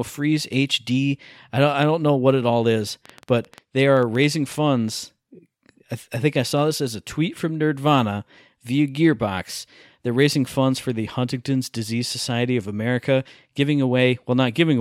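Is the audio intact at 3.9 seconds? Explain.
No, a train of clicks runs from 3.06 to 4.53 s: about fifteen similar pulses at an uneven 8.2 per second, likely interference, ticking slightly above the speech.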